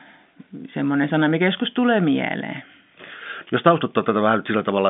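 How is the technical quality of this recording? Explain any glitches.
No glitches; this is ordinary telephone-band speech throughout.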